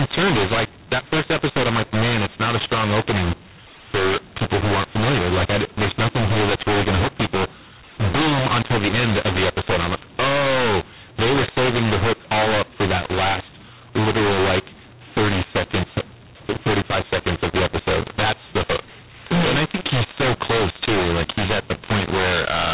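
Throughout, a mu-law and A-law mix-up: A-law samples decoded as mu-law scramble levels, so speech sounds harsh, and spectrogram pauses fill with noise instead of silence.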